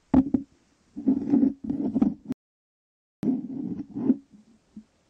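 A rebuffering stall runs from 2.32 s to 3.23 s. Playback drained its store of downloaded audio and had to halt until fresh data reached the player, so the sound drops abruptly into silence for about 0.91 s. When enough arrives, it picks up at exactly the point where it broke off, with nothing skipped or repeated. The gap simply inserts dead air, stretching the clip's running time by that same 0.91 s.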